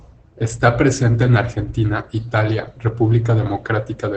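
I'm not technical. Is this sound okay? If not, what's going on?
No. Opus voice compression affects the whole clip, start to finish. To save space, the encoder discards all sound above 8.8 kHz and rebuilds the voice only roughly, so the speech comes out muffled, hoarse and a little robotic throughout.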